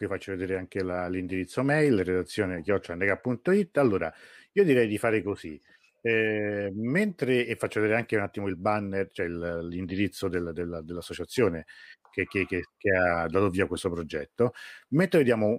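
Right after "vi faccio", from 0.40 to 0.85 s, there are CD scratch ticks: four quick clicks, the longest only a few milliseconds, repeating with each disc revolution. Damage on the disc beat the error correction, so the player patched or muted samples, just before "la l'indirizzo mail redazione".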